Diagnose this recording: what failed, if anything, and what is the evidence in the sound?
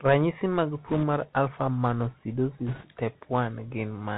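The whole clip has been through the Bluetooth CVSD headset codec, so this is a codec-stage problem. The speech stops dead around 4 kHz, s sounds come out scratchy, and a grainy hiss sits under everything. CVSD sends just one up-or-down bit per sample and adapts its step size as it goes, so loud high-frequency content outruns the step and smears. The damage is plainly audible, which fits a 64 kbps CVSD stream.

On top of that there are bit errors on a Bluetooth voice link, a network/radio-stage fault, in two short bursts at 0.87 to 1.04 s and 2.67 to 2.86 s. Each one brings a rushing, crackly noise over the speech, but no hard clicks. Since every CVSD bit carries the same small weight and a wrong step gets corrected within a few samples, flipped bits at roughly a few percent turn into noise rather than pops.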